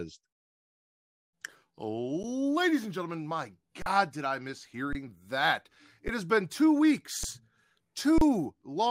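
The output buffer ran dry six times in this speech, an underrun with held sample each time: the converter froze on its last value, so the waveform goes flat and the sound simply stops, then resumes after live audio was lost meanwhile. Gaps fall at 2.23 s (11 ms), 3.82–3.86 s between "and gentlemen my" and "did I miss", 4.93–4.95 s, 6.08 s before "has been two", 7.24 s, and 8.18–8.21 s. The gaps at 2.23 s, 4.93 s and 6.08 s last 512, 1024 and 512 samples.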